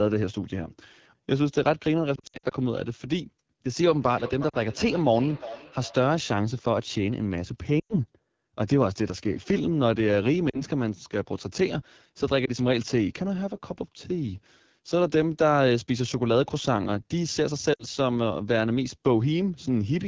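The whole clip is speech through the AMR wideband (HD Voice) codec, and it's rough and raspy throughout, which fits its low 8.85 kbit/s mode. Lost AMR speech frames show up as brief dips and warbles where the decoder fills the gaps by stretching the last good sound and fading it. The worst is a scattered patch from 2.16 to 2.53 s, then shorter ones at 4.50 s, 7.80 to 7.95 s, 10.49 to 10.62 s, 12.45 s and 17.73 to 17.84 s.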